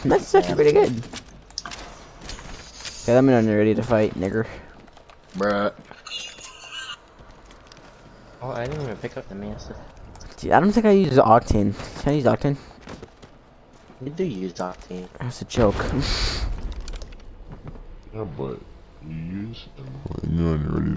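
From about 16.58 s to the end, the audio drops abruptly to roughly 0.73 times its speed and about 5.55 semitones lower in pitch. This is a wrong sample rate fault: samples are played back slower than recorded, which fits 22 kHz material played at 16 kHz.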